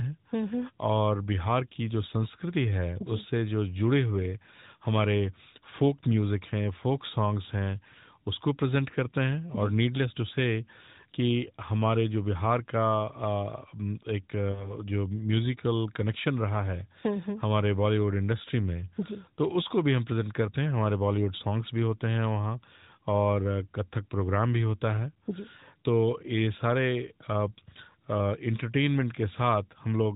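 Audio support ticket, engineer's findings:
Lost AMR speech frames, 14.52–14.75 s. Symptom: voice smears into a brief held, warbling tone, dips in level, then returns slightly rough. Cause: corrupted radio frames failing checksum. Gap fits two 20 ms frames; decoder repeated last pitch/vocal-tract parameters with decaying gain. Spectrogram: harmonics freeze flat and fade across the span, all below the 4 kHz narrowband ceiling. Waveform: repeated periodic cycles, envelope sagging toward the dropout, weak onset on recovery.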